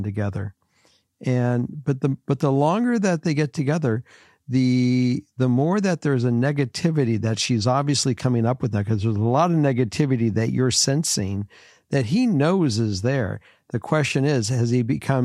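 No audible technical faults occur anywhere in this speech recording.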